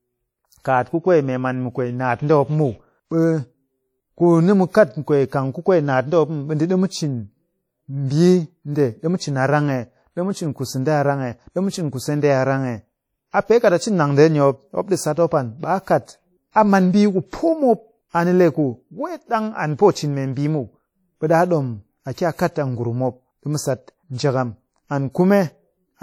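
Throughout the speech, ringing, washy quantisation noise and level-following hiss point to likely WMA compression, consistent with roughly 48 kbps, with nothing above 19.5 kHz. Pre-echo occurs at 0.61 to 0.65 s, 16.52 to 16.56 s and 22.13 to 22.17 s. Block noise spreads about 40 ms ahead of each attack, adding a brief hiss and smearing the onset.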